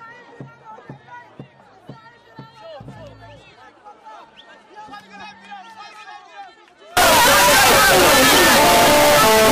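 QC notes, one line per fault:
6.97 s to 9.52 s, signed and unsigned mixed up: the audio suddenly turns into a wall of loud, harsh, buzzing distortion that runs to the end, with quiet moments blasting as hard as loud ones. This is likely a sign-convention mismatch on the 16-bit samples, so the top bit is flipped. Every crossing through zero then leaps from one extreme of the range to the other, and small signals become near full-scale swings.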